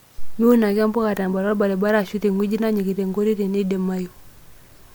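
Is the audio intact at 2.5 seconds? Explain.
Yes, the speech at 2.5 seconds is intact, with no fault at that moment.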